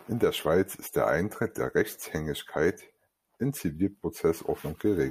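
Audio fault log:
Nothing stood out on listening to this speech recording.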